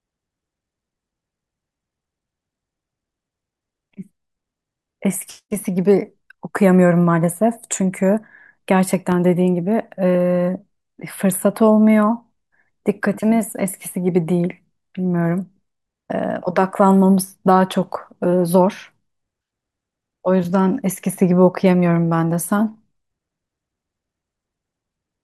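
Speech with a single loud pop from 9.12 to 9.15 s, a sharp click several decibels above the speech, which continues underneath, likely from a sudden voltage pulse such as a plug, switch or static discharge.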